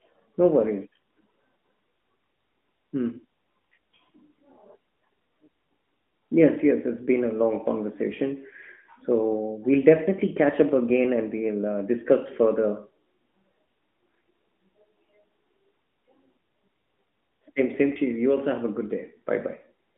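Speech carried over an AMR narrowband mobile codec at the usual telephone bandwidth of roughly 200 Hz to 3.4 kHz, with no technical fault to report.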